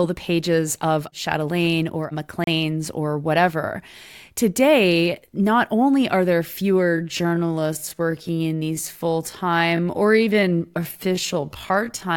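Speech clip with two faults. At 2.44 to 2.47 s the audio drops to silence for 32 ms and then resumes, a Bluetooth stall, likely from the wireless buffer running dry while resent packets arrived. From 6.79 s to the end the pace drops to about 0.63 times normal at unchanged pitch, sounding dragged, a time-stretched section likely produced by software repeating short pieces to lengthen the audio.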